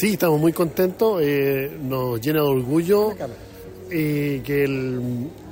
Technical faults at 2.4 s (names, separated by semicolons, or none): none